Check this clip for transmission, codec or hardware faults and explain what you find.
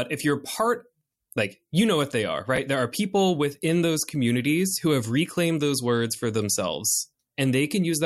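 One transmission fault is audible in this speech clip: chunks out of order between 2.56 and 2.58 s. A 10 ms chunk played one chunk late, after the chunk meant to follow it. The swapped order creates hard joins, heard as a brief jumbled stutter.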